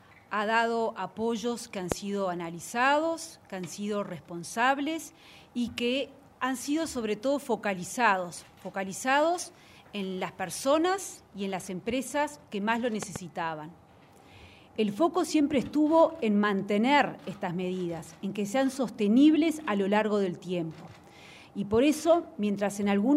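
Loud pops at 1.92–1.94 s, a single sharp hit far above the sound, and 13.03–13.18 s, a softer double pop, likely from a switch or static voltage spike.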